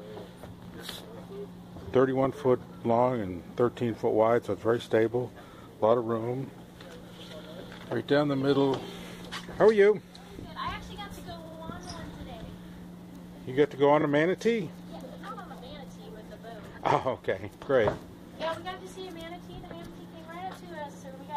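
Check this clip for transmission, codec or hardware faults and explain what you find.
Three repeated-frame faults are present, where the same compressed frames were played more than once.

Repeated frames occur at 11.45 s, 14.00 s and 20.92 s. At 11.45 s a 70 ms block plays twice more, and at 14.00 s (23 ms) and 20.92 s (46 ms) one block plays once more, each heard as a stutter. The 23 ms unit fits 1024-sample frames at 44.1 kHz.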